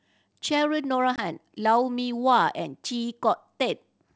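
At 1.16 s the speech drops into a hard-edged 20 ms silence, about one lost packet on the G.722 line, which is packet loss on an ADPCM call. The waveform shows a flat gap. Afterwards the decoder's predictor and step size are out of step, so the speech resumes slightly distorted until about 1.22 s, visible on a spectrogram as a blank column followed by a brief smear.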